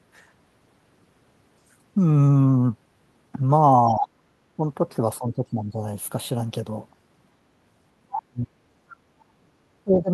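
Other side's voice leaking through appears from 3.88 to 4.08 s: a second voice sits about 10 dB under the talker for a fifth of a second. The cause is likely a loudspeaker playing the far end into the same room, with the echo canceller leaving a residue of it in the microphone signal.

Speech suppressed in double talk starts inside that leak, from 3.96 to 4.07 s, where the talker's level sags by around 15 dB. It is likely that the canceller, hearing both voices at once, could not tell its own talker from the echo and pulled everything down. The same ducking returns briefly at 4.56 to 4.62 s (around 10 dB) and for about half a second at 5.18 to 5.8 s (around 15 dB). From 8.03 to 8.52 s it becomes severe, with a drop of around 40 dB that nearly removes the voice.

Background gated by the echo canceller follows from 8.8 to 9.12 s. The room tone falls by about 15 dB for roughly 300 ms, then comes back, because the canceller clamped the microphone hard while the loudspeaker was active.

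Double-talk suppression closes the clip from 9.4 to 10.1 s, cutting the voice by around 40 dB for most of that stretch.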